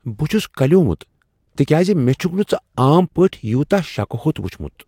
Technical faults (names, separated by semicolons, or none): none